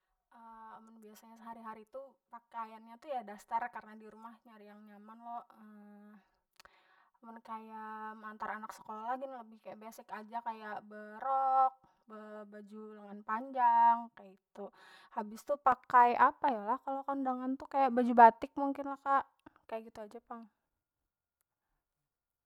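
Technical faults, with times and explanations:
0.0 to 15.72 s, channel delay (comb filtering): the speech sounds hollow, phasey and thinned until it opens up after 15.72 s. One channel runs roughly 5 ms late, so the mono sum cancels evenly spaced frequencies, with notches starting near 100 Hz and repeating about every 200 Hz.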